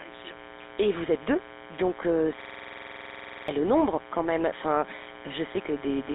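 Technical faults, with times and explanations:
Throughout: mains buzz. Interference from the 60 Hz supply has got into the signal path, most likely through a dimmer, rectifier or unshielded lead, adding sharp spikes twice per mains cycle. Because those spikes are so abrupt, their harmonics stack up from 60 Hz well into the upper frequencies. The result is a steady, raspy buzz sitting about 20 dB below the speech, present under every syllable and in the pauses alike.
Throughout: GSM full-rate codec. The speech has been passed through the original GSM telephone codec, at 13 kbps, which rebuilds the voice from a vocal-tract model driven by a sparse, regularly spaced pulse train rather than the real waveform. That coarse excitation gives the plainly audible gravelly, buzzy roughness on voiced sounds. The phone-line band runs roughly 300 Hz to 3.7 kHz, and nothing is left above 3.8 kHz, so sibilants sound dull and clipped.
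2.42 to 3.48 s: system hang loop. Right after "vous êtes deux donc", the computer or driver stalled while the audio hardware kept replaying the same stretch of its ring buffer. A 46.4 ms fragment, which fits a 2048-sample buffer, repeats 23 times at 21.5 Hz, producing a rapid machine-gun stutter instead of speech. About a second of real audio is lost, and normal playback resumes at "le nombre quand même".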